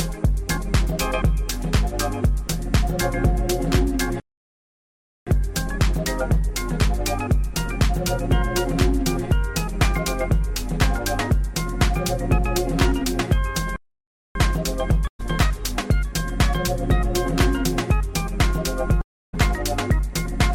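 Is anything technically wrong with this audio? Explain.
Yes. The audio has two playback stalls, a burst of packet loss and a long network dropout. Playback stall at 4.20 to 5.27 s (about 1.07 s) and 13.76 to 14.35 s (about 0.59 s): the player likely ran short of data or had its thread blocked, so output goes silent mid-flow and then picks up again.

Burst of packet loss at 15.07 to 15.21 s: a short run of audio arrived too late or not at all, and the receiver filled about 116 ms by extending the last sound and fading it. Roughly 120 ms is skipped before the sound resumes.

Long network dropout at 19.01 to 19.35 s: no audio likely arrived for this stretch. The receiver's fill fades out and leaves mostly silence for about 290 ms, and the sound returns with roughly 320 ms missing.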